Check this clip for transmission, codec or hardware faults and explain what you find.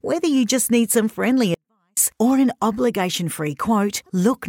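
One hardware-path fault is present. A 24-bit alignment error (too quiet) runs from 1.54 to 1.97 s, between "just need some friendly" and "or an obligation". The 24-bit samples, sitting in the low bytes of 32-bit words, are read as full 32-bit values, so the sound stays clean but drops about 48 dB, nearly vanishing.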